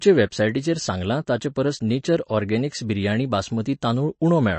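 Speech carrying plainly audible MP3 compression damage throughout: nothing is present above 8.3 kHz, and weak spectral detail switches on and off between frames, giving a watery, swirly texture with smeared attacks. This fits a low bitrate around 34 kbps, likely from MP3 encoding.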